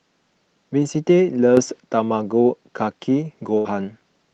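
It's a short speech clip that came through a call codec, which is why the top end stops at around 12 kHz, consistent with something like Opus at about 32 kbps. At 1.57 s there's a sudden gain jump: the voice and the background noise step up together by about 6 dB with no ramp, stay up until 1.80 s, then drop back. That's most likely a gain setting or bit shift being applied from one sample to the next rather than faded in. Later there's a burst of packet loss from 3.57 to 3.67 s. The receiver stretches the last bit of sound for about 75 ms while it fades, so you hear a brief held buzz or dying hiss in place of real audio. Then it jumps ahead, and around 80 ms of the speech is simply gone.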